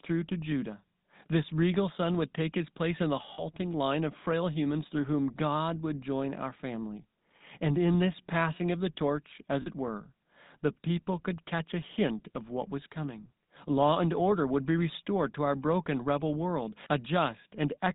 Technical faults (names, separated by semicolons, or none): GSM full-rate codec; lost GSM frames